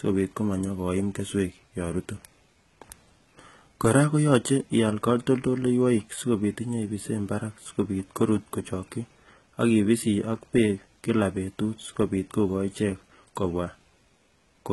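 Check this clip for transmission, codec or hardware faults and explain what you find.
One codec fault runs through the whole clip. From start to finish, the sound is likely HE-AAC compression with heavy damage, consistent with about 16 kbps. The upper band is rebuilt from copied lower bands, so s sounds come out gritty and metallic. A spectrogram shows repeated, smeared treble patches that stop sharply at 11.8 kHz.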